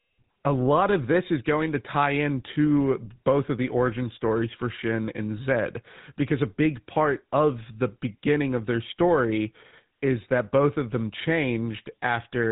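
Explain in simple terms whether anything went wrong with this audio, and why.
The speech went through a GSM full-rate codec, which rebuilds it crudely and cuts everything above 3.8 kHz, so it sounds buzzy, gravelly and muffled throughout.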